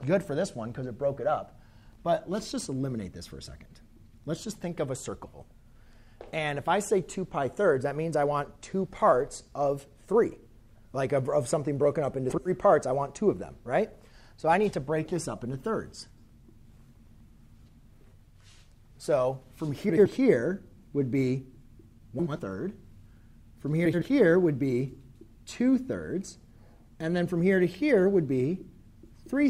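Frames out of order affect the audio at seven points: 5.25, 10.69, 12.30, 16.10, 19.90, 22.19 and 23.85 s. At each, two neighbouring 80 ms blocks play swapped, producing a brief garbled flutter with no lost time. A spectrogram shows three vertical seams bracketing a segment whose contours jump discontinuously.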